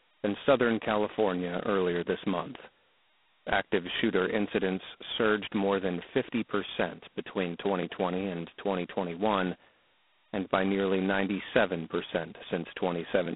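Speech runs the whole clip through G.726 ADPCM at heavy damage, likely its 16 kbit/s mode, with the line band held to 200 Hz to 3.5 kHz and nothing above 3.9 kHz. Unlike steady background hiss, the harsh rasp rises and falls with the speech level.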